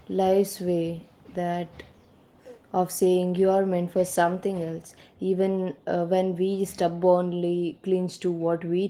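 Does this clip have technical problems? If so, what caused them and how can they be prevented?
No, nothing in this speech recording stood out as a problem on listening, so there is nothing here that needs preventing.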